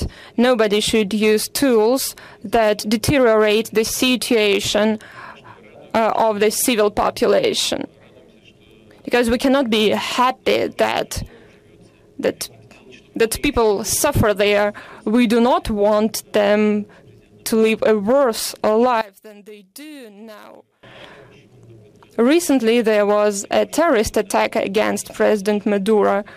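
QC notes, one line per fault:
19.01–20.83 s, one channel inverted: for about 1.8 s the sound falls by about 23 dB and turns faint, with the shared centre content nearly gone. The likely cause is one stereo channel flipped in polarity, so material shared by both sides cancels when summed to mono and only their difference survives. On the waveform the envelope collapses abruptly for that span; a spectrogram shows the whole band dimmed, leaving only faint residual content.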